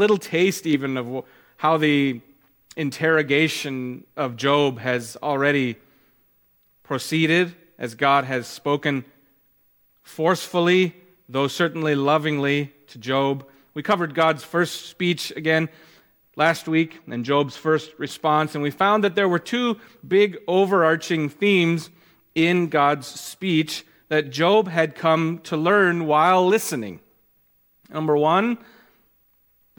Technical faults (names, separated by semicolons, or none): channel delay (comb filtering)